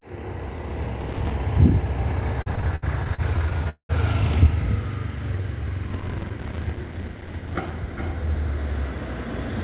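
A recording of everyday sound carries processor overload crackle from 1.00 to 1.34 s and again from 5.88 to 7.70 s, where the buffers the processor failed to finish in time leave tiny hard-edged silent gaps, fitting buffers of a few milliseconds. The result is gritty tearing rather than drag. Between 2.42 and 3.91 s, repeated stalls (stutter) come from late packets draining the jitter buffer fifteen times, with waits up to 199 ms. Each wait is bridged by continuing the last sound, so nothing is lost, but the audio drags and hiccups instead of crackling. The call path itself limits the band to nothing above 4 kHz.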